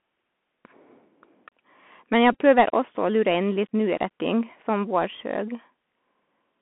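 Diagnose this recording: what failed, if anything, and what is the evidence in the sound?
Scratchy, granular hiss under the speech, harsh s sounds, and nothing outside roughly 200 Hz to 3.4 kHz: the Bluetooth CVSD headset codec at the codec stage, its one-bit adaptive step overloading on loud high content.

A brief buzzy stutter at 2.33–2.37 s, just before "prøver også å lure", and a short buzz at 3.70–3.72 s after "også å lure inn": Bluetooth headset packet repeated, where lost radio packets are replaced by decoding the previous packet again.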